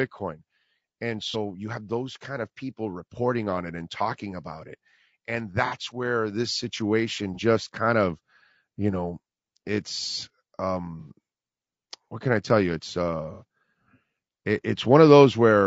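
From start to end, the speech sounds rough and grainy. Noise sits between the harmonics, and the top band sounds thin and synthetic. The damage is plainly audible. The likely cause is low-delay AAC compression of the AAC-ELD kind, at a rate that fits about 32 kbps. Its short frames resolve pitch harmonics poorly, so at this rate the voice loses its smooth texture.

AAC frame loss with concealment breaks in five times. The first is at 1.31 to 1.36 s, just before "you have those kind", and lasts 30 ms. The next runs from 5.66 to 5.77 s, just before "where this situation", and lasts 60 ms. Another falls at 7.34 to 7.39 s, between "where this situation" and "kind of you know", and lasts 30 ms. The last two are at 11.00 to 11.10 s and 13.34 to 13.43 s, each 60 ms. In each case the decoder had no data and rebuilt the gap from the last good spectrum. Each one is a brief smeared, noisy patch.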